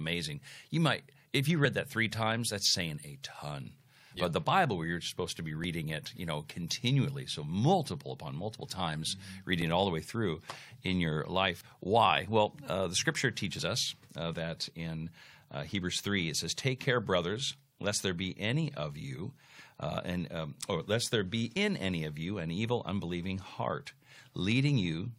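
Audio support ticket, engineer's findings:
Overlap between stream segments: brief micro-skips at 3.66 s (after "times that's saying a", before "but the"), 5.64 s, 9.62 s (before "it all the way"), 11.61 s, and 21.57 s (after "or lest there be", before "any of you an"). All land on a 2.0 s grid, pointing to the segmenter/player join logic. Overlapping timestamps make the player trim genuine audio, mostly about 6 ms (about 19 ms at 9.62 s), so the waveform jumps at each join.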